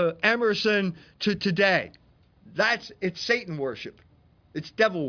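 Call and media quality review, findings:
No audible faults found in the speech recording. Nothing to escalate.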